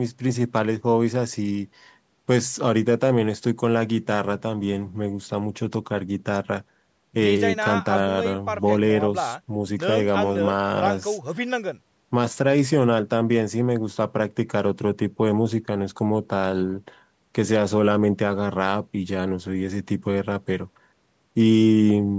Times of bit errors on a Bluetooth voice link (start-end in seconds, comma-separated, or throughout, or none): none